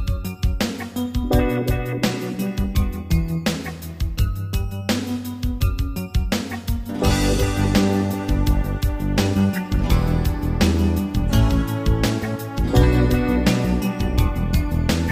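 No technical faults are audible.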